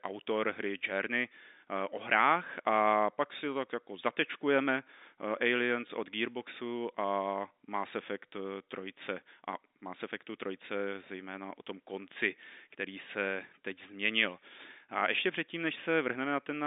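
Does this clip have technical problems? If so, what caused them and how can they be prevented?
No, there are no technical problems in this speech clip. The G.711 telephone coding is working as expected, which is why the sound sits in the narrow telephone band of about 250 Hz to 3.7 kHz, with nothing above 3.8 kHz.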